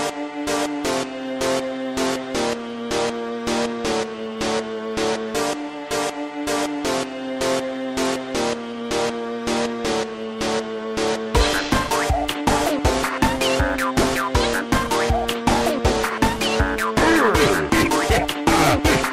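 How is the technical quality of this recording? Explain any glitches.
The recording carries one fault that runs for its whole length: sample clock jitter. The converter's timing wanders by roughly 3 microseconds, so each sample lands slightly early or late. Where the waveform changes fast, that timing slip becomes an amplitude error, sitting around 30 dB below the sound itself. The result is a grainy hiss that swells on loud, bright moments of these sounds and disappears in silence. That rise and fall with the sound is what separates it from an ordinary noise floor, which would hiss at a steady level even in silence.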